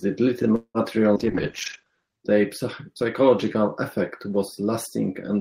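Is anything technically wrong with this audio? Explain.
Yes, there are four faults in this speech clip.

From 0.55 to 0.78 s there is a call audio freeze, likely from delayed packets draining the jitter buffer. About 190 ms of filler is inserted: the last sound is stretched into a fading buzz that ends in roughly 70 ms of silence, then speech resumes with nothing lost.

From 1.15 to 1.19 s there is a skip ahead. Roughly 70 ms of audio was dropped in transit or by the buffer, so playback jumps forward with almost no gap.

From 1.15 to 2.27 s there is a call bitrate drop. The encoder was cut from 32 to 9 kbps and its bandwidth narrowed from 20 kHz to 8 kHz. The speech turns muffled and coarse, staying at its lowest for about a second.

From 1.85 to 2.36 s, just before "psychological effect was", a jitter buffer slow-down repeats pitch periods to rebuild the reserve. This adds 64 ms, and speech plays at 89% speed with unchanged pitch, sounding slightly drawn out.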